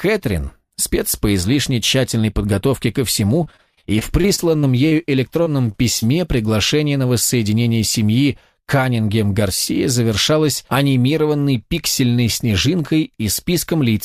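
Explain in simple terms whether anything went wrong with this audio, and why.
Yes, two related problems. From 3.43 to 4.95 s there is repeated packet loss (robotic sound): eleven short gaps, none longer than 27 ms, each patched by continuing the previous sound, which makes it choppy.

Then there is short concealed packet loss at 5.43–5.48, 5.72–5.76 and 6.00–6.04 s. About 20 ms went missing each time, and the gap was filled by extending the last sound, causing a brief smear.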